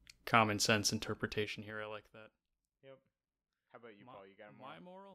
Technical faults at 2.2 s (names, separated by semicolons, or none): zipper noise